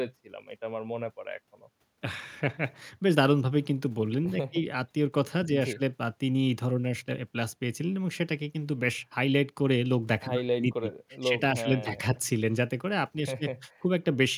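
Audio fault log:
Nothing stood out on listening to this speech recording.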